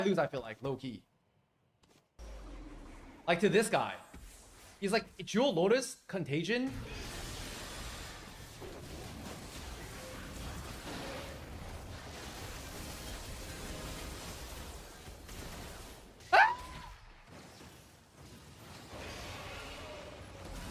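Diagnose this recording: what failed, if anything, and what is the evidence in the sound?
Nothing failed; no faults detected.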